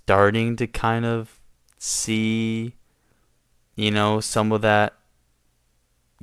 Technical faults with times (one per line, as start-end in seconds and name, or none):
none